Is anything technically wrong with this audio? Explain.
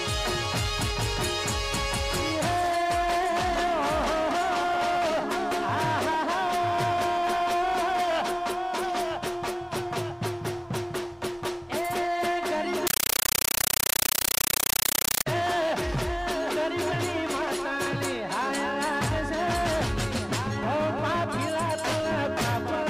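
Yes. From 12.87 to 15.26 s, a compressed stream is played as audio. An AC-3 bitstream is treated as plain PCM rather than decoded, so each frame becomes a 9.33 ms noise burst followed by silence, 31.25 times a second. The result is loud, chattering static.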